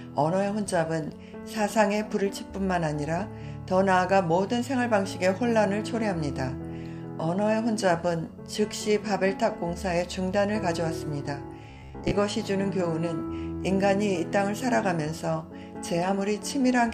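From 11.70 to 12.12 s the sound collapses into robotic sound from repeated short buffers: a rigid, metallic buzz at 66.7 Hz that only loosely tracks the underlying audio. The likely cause is new audio arriving too late, so playback loops the most recent fragment, about 15 ms long, to fill the gap. Most of that stretch is repeated material rather than fresh signal, and the fixed loop length imposes the steady buzz pitch.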